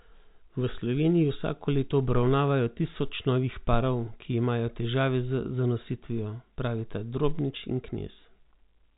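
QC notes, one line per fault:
No faults found; the speech sits in a telephone band with nothing above about 3.8 kHz, consistent with G.711 A-law coding at 64 kbps.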